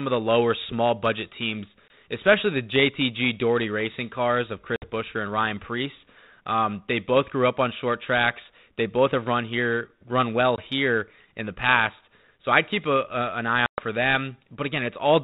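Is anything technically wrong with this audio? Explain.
Yes. The speech has four packet-loss dropouts on an ADPCM call: at 1.88 s, from 4.76 to 4.90 s, from 10.56 to 10.61 s, and from 13.66 to 13.80 s. These remove about 20, 60, 20 and 120 ms of audio, the longest roughly seven packets. Each gap is filled with hard-edged silence. Because ADPCM sends only differences from an adaptive prediction, the receiver's predictor and step size drift away from the sender's during the hole. Speech therefore resumes slightly distorted, then settles within tens of milliseconds. The underlying band-limited G.726 coding, consistent with a 32 kbit/s link, carries only light codec damage.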